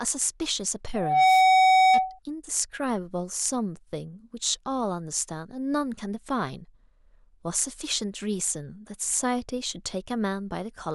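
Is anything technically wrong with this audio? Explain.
Yes, there's a loudspeaker feedback squeal from 0.93 to 2.19 s: a 753 Hz tone swelling within a fraction of a second to roughly 15 dB over the speech, because the mic is catching its own speaker.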